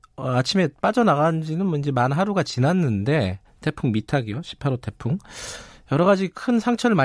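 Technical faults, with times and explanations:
Nothing stood out as a technical problem on listening to this speech recording.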